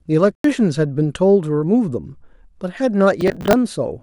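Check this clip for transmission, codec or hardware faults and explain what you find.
Two faults stand out in this speech clip: a short dropout near the start and a burst of crackle near the end.

From 0.35 to 0.44 s there's a corrupt frame muted. Some bits in a compressed frame got flipped, the decoder rejected it, and the player dropped in silence instead. You hear a clean hole about 94 ms long that cuts in abruptly, which fits a single lost frame. The timing after it stays intact, so nothing slips or speeds up.

From 3.21 to 3.53 s there's processor overload crackle. The processor couldn't keep up, and buffers that looked to be around 10 ms each kept missing their deadlines. Something like twenty of them missed over that stretch. Each miss replayed a scrap of old audio with hard edges, so across that third of a second you get a gritty, tearing crackle riding on the speech. It stops once the load eases.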